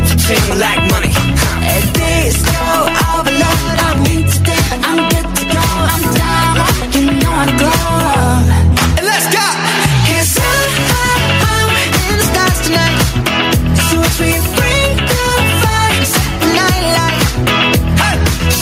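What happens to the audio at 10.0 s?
Gain pumping is audible at 10.0 s, as it is across the whole clip. The level swings by roughly 5 dB, squashing the dynamics. The likely cause is excessive gain driving a fast limiter or compressor.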